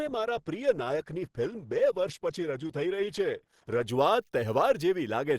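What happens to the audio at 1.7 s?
At 1.7 s the audio is in an adaptive stream starting at a low bitrate: from 0.0 to 3.89 s, thin, low-bitrate speech with stronger codec artefacts before an abrupt, gapless step up. On a spectrogram the treble is missing or synthetic until that switch.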